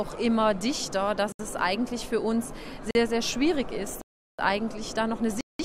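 The audio drops into blocks of digital silence at 1.32 s (71 ms), 2.91 s (42 ms), 4.01 to 4.39 s (372 ms) and 5.41 to 5.59 s (186 ms). Each cut is abrupt, unlike a faded dropout. The longer gaps fit whole buffers of 16384 and 8192 samples left unfilled in time.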